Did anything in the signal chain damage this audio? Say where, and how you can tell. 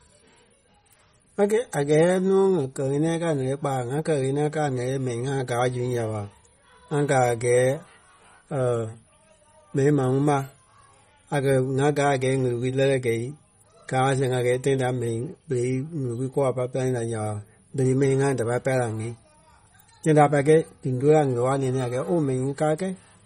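Yes. Throughout the speech, the treble stops dead at 16 kHz and the sound has a watery, swirling texture, which points to MP3 compression at the codec stage, likely at a low bitrate around 32 kbps. A simple low-pass filter would cut the top without that swirl.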